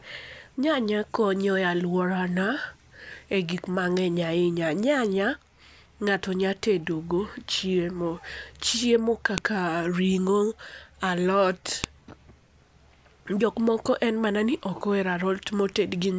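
At 9.38 s and again at 11.84 s the speech is broken by a sharp, loud click, a file header played as audio: separately saved WAV pieces were joined without stripping their headers, so those header bytes sound as samples. Each shows as a lone spike on the waveform and a thin full-height vertical line on a spectrogram.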